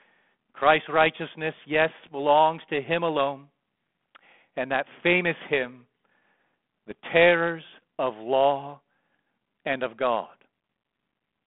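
At 2.02 to 2.11 s and again at 6.91 to 6.95 s the speech is hit by bit errors on an ADPCM link. The narrow 200 Hz to 3.5 kHz telephone band and light codec grain fit G.726 at 32 kbit/s. A corrupted code word throws off the decoder's step size and predictor, so a single error becomes a rough, pop-led burst with a brief level jump that rings on for some milliseconds. A clean dropout or a one-sample click would not do that. The sound points to an error rate of about 0.3 percent.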